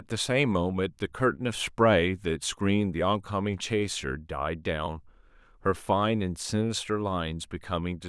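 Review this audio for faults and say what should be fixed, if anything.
Nothing needs fixing: the speech signal holds steady throughout, with no dropouts, level jumps or other technical faults to be heard.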